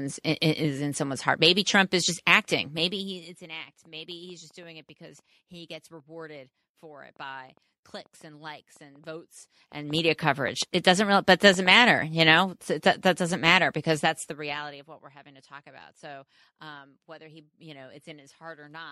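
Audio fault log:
3.85–11.72 s, train of clicks: a run of some thirty short, similarly shaped clicks arrives at about 4.2 per second, spaced unevenly rather than on a steady beat. Their peaks reach roughly the level of the speech itself, so they tick through the talking and stand out plainly in the gaps between phrases. The repeated, closely matching pulse shape points to an external injection, likely electrical interference from nearby equipment or a faulty connection or power supply.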